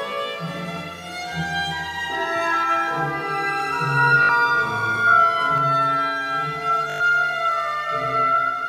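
Bluetooth stutter hits at 4.23 to 4.29 s. Late or lost wireless packets leave the receiver replaying its last short buffer, so a tiny slice repeats as a brief machine-gun buzz. About 61 ms of sound is skipped, consistent with roughly three missing packets.

Channel delay (doubling) begins at 5.58 s and runs to the end. One channel falls about 93 ms behind the other, which fits a 4096-sample buffer. When the two are folded to mono, the sound arrives twice, heard as a slap-back doubling at equal level.

A second Bluetooth stutter follows at 6.90 to 7.00 s, inside the doubled stretch. The repeated-slice buzz lasts longer here, and roughly 100 ms of sound is lost, pointing to about five dropped packets before playback resumes further along.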